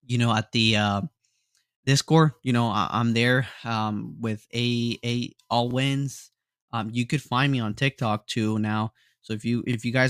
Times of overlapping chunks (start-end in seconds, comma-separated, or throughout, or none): 5.71-5.73, 9.73-9.76